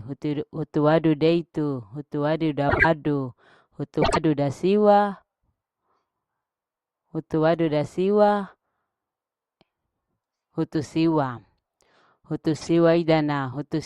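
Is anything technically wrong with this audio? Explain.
Yes. This speech has frames out of order three times: 2.69 to 2.85 s, just after "hutu wadu"; 4.02 to 4.17 s, just before "ida siwa"; and 12.56 to 12.70 s. Each time, two adjacent blocks of about 52 ms, which fits pairs of codec frames, were decoded in swapped order. The halves play exchanged, giving a brief garbled flutter. No time is lost.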